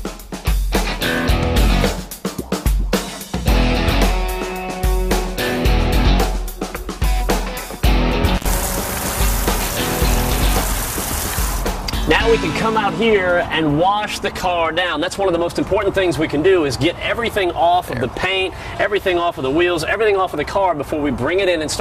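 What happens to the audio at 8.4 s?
At 8.35 to 8.47 s the audio suffers an intermittent contact: a loose cable or plug briefly loses its connection, so the signal drops out for about 77 ms, with crackle as the contact breaks and remakes. While the path is open only faint hiss remains. On a waveform this shows as a sudden near-flat gap framed by sharp spikes; a spectrogram shows a dark vertical band with bright broadband streaks at both edges.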